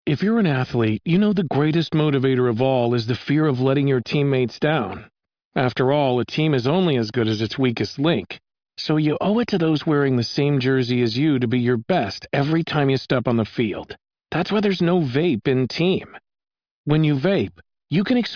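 No technical faults can be heard anywhere in this speech recording. Nothing in the audio breaks, drops out or distorts at any point.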